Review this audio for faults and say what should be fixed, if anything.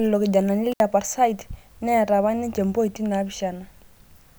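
An intermittent contact fault runs from 0.72 to 0.80 s in this speech clip. The signal drops out for about 67 ms, with crackle at the onset and the return where a loose plug or cable conductor momentarily lost contact and then reseated. The break is abrupt rather than faded, which points to a physical connection opening, not a gate or a level change. The affected section needs re-recording or careful repair. To prevent it, reseat and secure connectors, replace worn cables, and use strain relief so movement cannot break the circuit.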